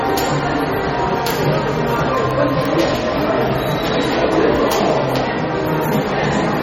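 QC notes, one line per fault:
Throughout: MP3 compression, likely. Plainly audible codec damage smears the sound, with a watery, swirly texture and metallic chirps on bright detail. Nothing remains above 16.5 kHz. That points to about 32 kbps, where weak frequency lines drop in and out between frames.
0.23 to 6.46 s: word clock ticks. Sharp single-sample ticks of uneven strength recur about every 0.15 s, some forty in all. A receiver running on its own clock drifts against the sender. Each slip misreads samples and drops or repeats one.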